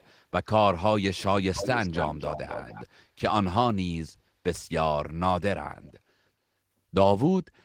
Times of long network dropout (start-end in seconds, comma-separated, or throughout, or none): none